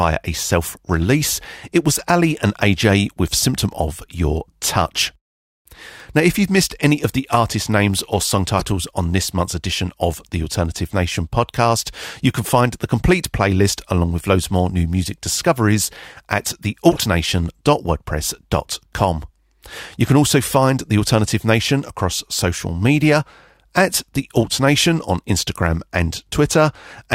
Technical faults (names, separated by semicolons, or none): corrupt frame decoded